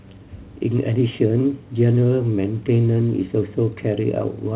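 Nothing's technically wrong with this bit of speech: it simply has the narrow-band sound of a G.711 call line, with nothing above 4 kHz, and a faint room noise sitting about 42 dB below the talking.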